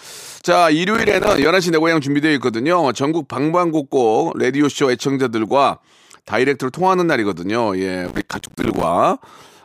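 The processor repeatedly missed deadlines on tiny buffers in this speech clip, each miss dropping a few milliseconds to silence, which fits buffers of about 5 ms. The result is processor overload crackle: gritty tearing from 0.95 to 1.45 s, and denser from 8.05 to 8.83 s.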